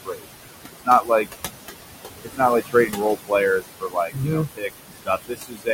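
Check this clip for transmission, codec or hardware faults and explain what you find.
Two related faults come from an over-aggressive noise suppressor, which is acting on room noise that sits only about 8 dB below the speech.

Noise suppressor artifacts run through the whole clip. Frame by frame, the suppressor pulls down every band it judges to be steady noise, by about 19 dB. The background therefore drops away in gaps and swells back under speech. Plain room noise would stay level and smooth; this pumps with the speech.

Speech cut by the noise suppressor happens at 0.04–0.25 s, 0.73–1.27 s, 2.23–2.41 s, 2.61–3.33 s, 3.60–4.29 s, 4.47–4.70 s, 4.87–5.10 s and 5.28–5.69 s. The suppressor mistakes softer speech for noise and drops it with the background, by about 19 to 22 dB at worst. Each time, between a fraction of a second and nearly half a second of speech sounds swallowed or faint. 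A network dropout would leave a hard silence or a glitch, but these parts fade out softly and come back.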